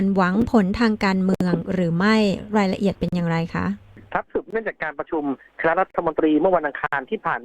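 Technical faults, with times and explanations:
0.42 to 6.93 s, block of digital silence: six dropouts, at 0.42 s (about 5 ms), 1.35–1.41 s (60 ms), 3.09–3.13 s (40 ms), 4.51–4.53 s (20 ms), 5.91–5.95 s (40 ms) and 6.87–6.93 s (60 ms). Each time the output was replaced by zeros, most likely because the buffer wasn't filled in time. The cuts are abrupt, with no fade. The shortest is a tick, and the longer ones are audible holes. The waveform drops to a near-flat line, and the spectrogram shows blank vertical bands.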